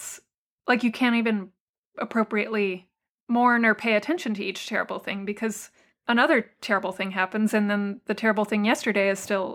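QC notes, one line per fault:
No technical faults were found in this speech recording; the signal holds steady and continuous across its whole duration.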